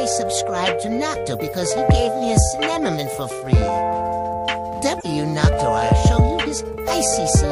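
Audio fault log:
1.90 s and 5.00–5.05 s, corrupt frame decoded: damaged bits in compressed frames were decoded instead of concealed, so misread gains and codes put energy at wrong frequencies. A very short blip at 1.90 s and a burst about 5 dB quieter spanning a couple of frames at 5.00 s.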